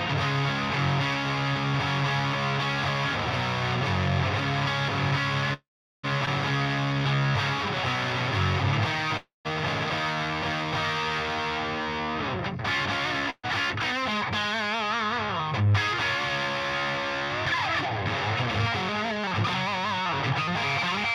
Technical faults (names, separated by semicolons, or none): call audio freeze; skip ahead; jitter buffer slow-down; jitter buffer speed-up